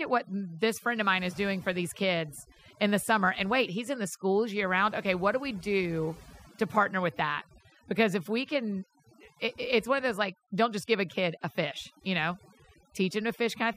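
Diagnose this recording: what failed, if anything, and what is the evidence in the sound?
Overdone noise removal in the call processing stage, throughout: suppression gating bands near its noise estimate leaves near-silent, twinkling background and speech losing its quieter parts.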